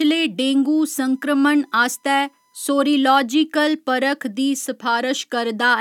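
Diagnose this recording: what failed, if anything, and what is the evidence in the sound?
USB whine, entering through the analogue power or ground wiring: from 0.95 to 2.95 s a fixed 1 kHz tone sits under the speech, roughly 45 dB down. Current drawn in 1 ms bus frames leaks into the ground, leaving a thin horizontal spectrogram line at 1 kHz.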